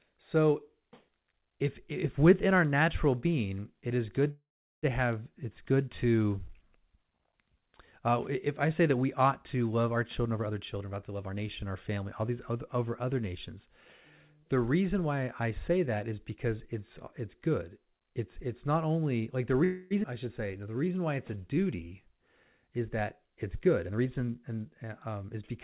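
This speech clip has a receiving device running on its own clock instead of locking to the sender's digital link, which produces word clock ticks. Each clock slip drops or repeats a single sample, giving about forty sharp, uneven ticks roughly every 0.7 s from 0.68 s to 25.61 s, consistent with a clock error of a few tens of ppm. From 4.31 s to 4.86 s, the last sound is stretched into a fading buzz and then about 0.4 s of silence before the audio resumes with nothing lost. This is a call audio freeze, likely from delayed packets draining the jitter buffer. A second, shorter freeze from 19.64 s to 19.94 s fills 0.27 s with a continued buzz and no silence. A jitter buffer speed-up, in which the receiver trims surplus buffered audio one or a few pitch periods at a time, makes the speech run hurried at 114% speed from 9.94 s to 13.69 s and at 109% from 22.67 s to 25.40 s, with pitch unchanged. 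At 20.03 to 20.06 s, a skip ahead drops roughly 200 ms, so playback jumps forward and joins the two sides almost directly. A jitter buffer slow-down, where the receiver repeats pitch periods to rebuild its reserve, then adds 166 ms from 20.47 s to 22.20 s, drawing the speech out at 91% speed. Underneath all of this, the call path passes nothing above 4 kHz, which fits narrowband telephone coding such as G.711.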